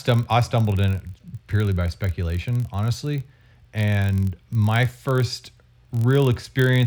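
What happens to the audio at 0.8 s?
At 0.8 s you're hearing the block size mismatch (padded) that runs through the whole clip. Each block gets a short run of zeros tacked on, so there's a buzz at about 43.1 Hz, which fits 1024-sample reads. The speech slows only very slightly (0.999x) and keeps its timbre.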